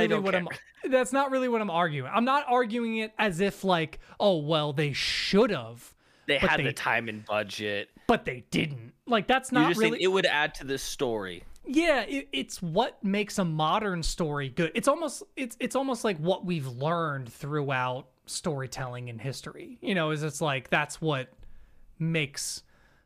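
Speech recording, no technical faults detected.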